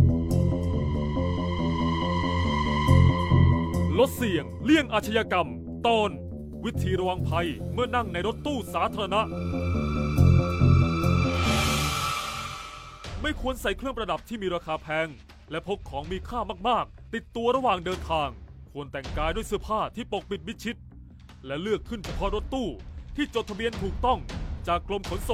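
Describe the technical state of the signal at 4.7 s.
Nothing is wrong with the signal at 4.7 s; the audio is intact at that point.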